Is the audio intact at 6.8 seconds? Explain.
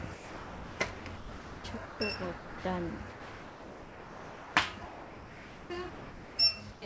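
No. From 6.72 to 6.82 s the sender's voice detector likely treated the sound as background and stopped sending, a case of sound dropped by the voice detector. For those 100 ms the sound gives way to steady comfort noise before returning.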